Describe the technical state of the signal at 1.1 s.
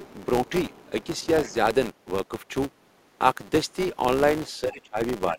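At 1.1 s there's a faint second voice underneath, other side's voice leaking through from 0.7 to 1.27 s, about 30 dB below the talker. It's likely a far-end loudspeaker the echo canceller didn't fully remove. Under that runs a steady 200 Hz buzz from the filter restarting on every block: each block starts from a cold state, so the ticks follow the signal's level.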